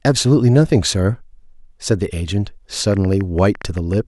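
A speech recording with a train of clicks from 2.92 s to 3.94 s: around ten similar sharp pops at an uneven pace averaging 9.9 per second, peaking about as loud as the speech itself. On a waveform they show as narrow vertical spikes standing out from the speech envelope; on a spectrogram, as thin full-height vertical lines spread across all frequencies at irregular gaps. The cause is likely electrical interference from nearby equipment or a faulty connection or power supply.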